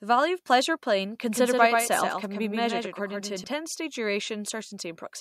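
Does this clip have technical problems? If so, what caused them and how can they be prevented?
Yes, a doubled audio track from 1.26 to 3.44 s: a full-band copy about 5 dB quieter trails the speech by roughly 150 ms. It likely comes from a second, slower capture path mixed in, and the waveform shows repeated, offset transient shapes that start and stop abruptly. Preventing it means routing the source through a single path and muting any duplicate monitoring or loopback input.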